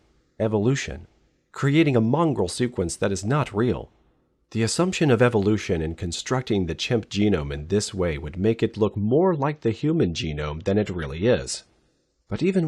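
It's a speech clip, and at 8.84 s it suddenly drops to a lower-bitrate version of the adaptive stream, with no gap, through to the end. Everything above about 11.5 kHz vanishes and the artefacts thicken, which points to the connection sagging and the player stepping down from roughly 96 to 32 kbit/s AAC.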